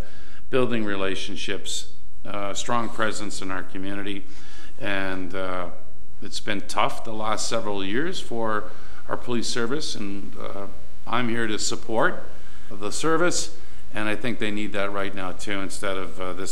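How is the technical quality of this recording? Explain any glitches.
One fault stands out. From 7.12 s to the end, a faint mains buzz sits about 40 dB down. Switching spikes twice in every 60 Hz cycle spread harmonics upward, making it steady and raspy.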